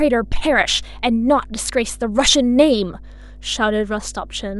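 Mains hum runs under the speech from start to finish: a steady 50 Hz tone with low harmonics, roughly 20 dB below the speech, from power-line coupling through a ground loop or nearby transformer.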